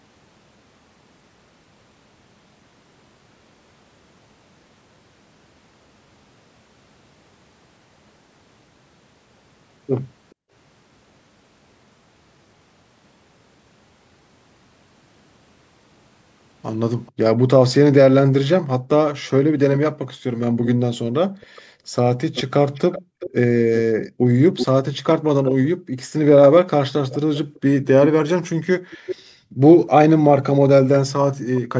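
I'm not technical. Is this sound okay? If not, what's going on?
No. There is an echo leak at about 10.3 and 17.06 seconds, faint and brief, then much louder from 19.73 to 29.16 seconds. A delayed copy of the speech returns roughly 0.4 seconds late, likely because the other person's loudspeaker was picked up by their microphone and their echo canceller missed some of it.

There is also background gated by the echo canceller at 10.35 to 10.51, 19.92 to 25.97 and 27.5 to 29.61 seconds. The room sound drops sharply for short moments, about a second and a half in total during the middle stretch, because the canceller turns the microphone right down while the loudspeaker plays.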